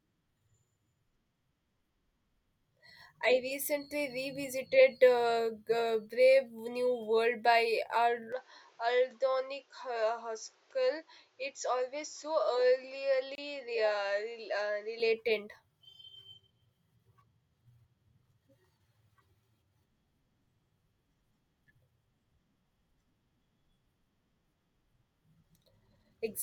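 From 8.32 to 15.0 s the speech turns duller and about 5 dB quieter, with nothing above 7.6 kHz and a new noise floor well below it. This is likely an input switched to a poorer device. At 13.35 to 13.38 s a 27 ms gap opens in the speech, its edges smeared, a gap at a join of separately encoded pieces whose padding was left in.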